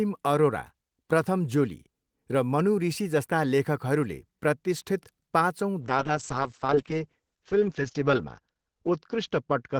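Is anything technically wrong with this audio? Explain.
Yes. There is a call bitrate drop from 5.82 s through to the end of the clip. The call's bandwidth estimate fell, so the encoder had to code the speech with far fewer bits, consistent with a fall from about 32 kbps to 8 kbps. The audio band narrows from 20 kHz to 8 kHz, and the quantisation grows coarse, bottoming out for about 1.7 s. The speech sounds muffled and rough, with a watery texture, and it does not recover before the clip ends.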